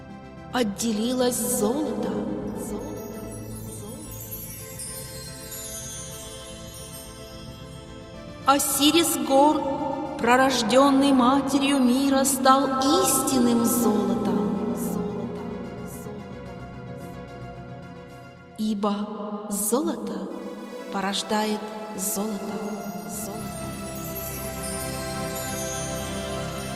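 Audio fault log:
No fault is logged for this audio.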